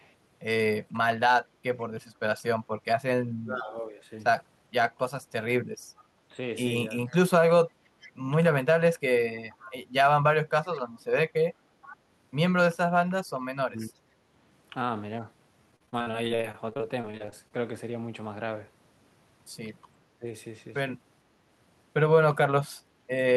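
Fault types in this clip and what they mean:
Echo leak: The far end likely plays the call over a loudspeaker, and its echo canceller lets part of that pickup slip back into the return path. The result is a delayed copy of the speech trailing about 0.47 s behind. It appears as very faint scraps at 0.0 s and around 1.8 s, then as a steadier, more noticeable ghost from 5.97 to 11.97 s, sitting roughly 25 dB below the main speech.
Speech suppressed in double talk: When both sides speak together, the echo canceller likely cannot tell its own talker from loudspeaker echo and pulls the level down on both. The talker's speech dips by about 15 dB from 3.4 to 4.03 s, slightly around 6.31 to 6.39 s, and hardest, by about 25 dB, from 13.58 to 14.01 s. A brief 15 dB dip follows near 20.2 s.
Repeated packet loss (robotic sound): Audio packets went missing or arrived late over and over between 15.71 and 17.52 s. 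The receiver patched each hole by stretching the previous sound, and the next hole arrived before the speech could settle. Over twenty short gaps, the longest 43 ms, add up to 469 ms of filled-in sound and 360 ms simply missing. About a quarter of the stretch is concealed, which gives a choppy texture with pieces missing.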